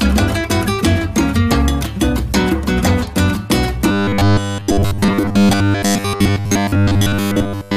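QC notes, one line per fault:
3.91 to 7.76 s, robotic sound from repeated short buffers. The sound turns rigid and metallic, with a steady buzz at 100 Hz laid over it. The broad shape of the original still comes through. The likely cause is fresh audio arriving too seldom, so playback keeps looping the last 10 ms chunk. That fixed period sets the buzz pitch. Roughly 70 percent of the stretch is repeated material, so the real signal is heard only in patches.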